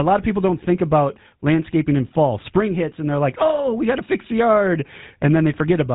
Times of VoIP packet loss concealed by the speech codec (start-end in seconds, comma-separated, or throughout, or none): none